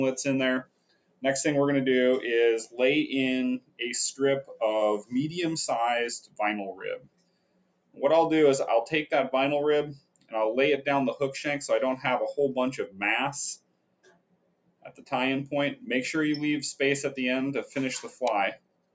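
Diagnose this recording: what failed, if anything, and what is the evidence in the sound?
The level pumps and thins throughout, with sustained sound sinking by roughly 20 dB while attacks pass. This is a noise suppressor applied to music or sounds: call processing's speech-oriented suppressor treating steady content as noise.

Sound cut by the noise suppressor is clearest where held or decaying material collapses by about 21 dB. This happens at 0.63–1.24 s, 3.59–3.8 s, 4.43–5.12 s (about 18 dB), 6.22–8.02 s, 9.95–10.34 s, 12.87–13.02 s (about 12 dB), 13.57–15.12 s and 18.07 s to the end.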